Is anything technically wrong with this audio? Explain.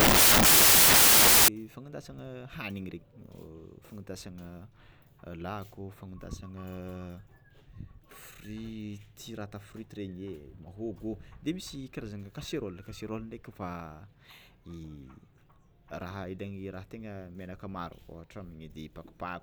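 Yes. From 0.0 to 1.48 s, just before "fagnandasana hanigny", there is a wrong sample width fault. The 16-bit data are read as packed 24-bit, so values mix bytes from neighbouring samples. This gives loud noise with the speech buried underneath, running 1.5 times fast and higher in pitch.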